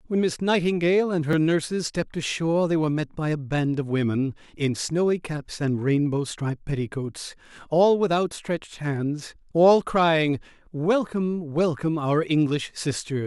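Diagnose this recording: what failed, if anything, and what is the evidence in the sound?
Driver or buffer stage: a block of digital silence at 1.33 s, a brief tick from a 2.9 ms gap (fits a 128-sample buffer underrun), visible as a flat, near-silent waveform notch with broadband vertical lines at each edge.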